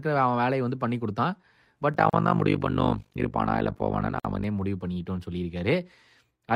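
From 1.94 s to 4.46 s the speech carries overlap-add ripple. The signal was split into windowed frames and rebuilt with an overlap whose windows do not sum to a constant gain, so the level swings once per frame, around 50 times a second, with a depth of about 60 dB. It comes across as a fast flutter, a rough tremolo chopping through the sound for that stretch.

Within that passage there are two gaps at a join of encoded pieces, at 2.10 to 2.13 s (32 ms) and at 4.20 to 4.25 s (49 ms). Each sits where separately encoded segments were butted together without trimming the encoder's start-up delay and final-frame padding. The sound drops to silence with smeared edges, then resumes exactly where it left off.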